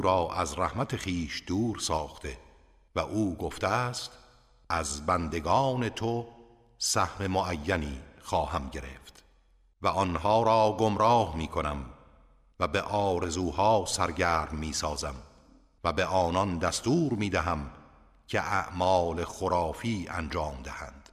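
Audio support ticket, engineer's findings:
Sudden gain jump, 1.98–2.25 s: sound and noise floor drop together by about 4 dB, stepwise, no ramp. Likely an unsmoothed digital gain change applied between consecutive samples.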